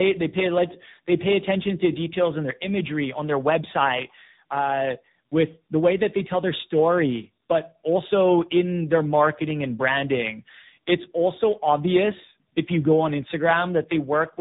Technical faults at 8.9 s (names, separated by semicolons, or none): tandem speech coding